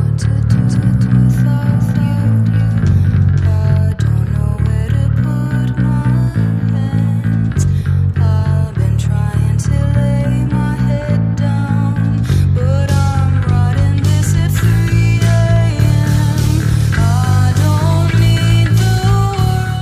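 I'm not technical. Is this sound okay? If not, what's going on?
No. From about 0.51 to 3.73 seconds there's a doubled audio track: a second, slightly quieter copy trails half a second behind, likely from an editing slip.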